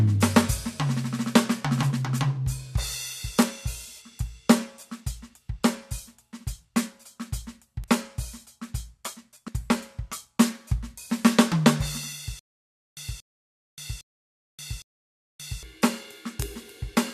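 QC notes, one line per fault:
0.37, 3.43, 7.84 and 16.42 s: bit error spike, four single-sample ticks where a flipped bit jumped the value by a power of two and returned, sharp, broadband, unrelated to the music.
9.47 s: compressed frames skipped, about three 21.3 ms frames missing, so the music jumps ahead roughly 70 ms.
12.39 to 15.63 s: stutter with silent gaps, a 232 ms fragment repeats four times every 809 ms with 577 ms of digital silence between, likely a stalled player retrying.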